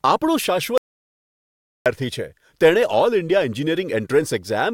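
From 0.78 s to 1.86 s the speech cuts out mid-flow in an audio dropout to silence, losing 1.08 s. The input link likely failed while recording continued, writing silence. No room tone remains, so the waveform lies dead flat and the spectrogram shows an empty column.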